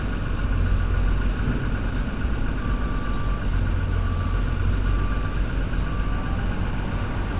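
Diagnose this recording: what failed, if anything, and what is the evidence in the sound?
The jitter buffer, at the call-processing stage, found itself holding more audio than its target and drained the excess by repeatedly cutting out short pitch-period-length pieces. This jitter buffer speed-up runs from 1.40 s to 5.67 s at about 107% speed, with around a third of a second removed in total. The sound plays faster but keeps its pitch, so it feels hurried across that stretch. The whole clip stops at 4 kHz, which fits a G.711 mu-law call path.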